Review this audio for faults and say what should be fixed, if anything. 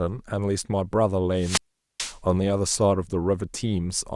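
A wireless microphone squelch dropout runs from 1.36 to 2.18 s in the speech. The FM radio link fades, hiss rises briefly, then the receiver's squelch mutes the output for about 425 ms before the signal recovers. Prevent it by improving line of sight, antenna placement and frequency coordination.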